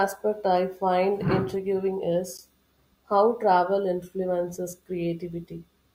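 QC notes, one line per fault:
2.37 s, gap between stream segments: right after "I find intriguing" the speech drops into a hard-edged hole of silence about 13 ms long. Two segment timestamps fail to meet, so playback pads silence; nothing is lost. Placement fits 4-second segments.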